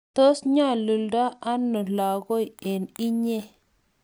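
From 1.76 s to the end, the speech shows imaging from sample-and-hold upsampling: audio at 22 kHz was raised to 44.1 kHz by repeating samples without a smoothing filter, so a mirrored spectrum fills about 11 to 22 kHz. It sounds like a bright metallic fizz riding on the speech at about 28 dB below it. A spectrogram shows an inverted copy of the formants above 11 kHz, and the zoomed waveform shows a staircase.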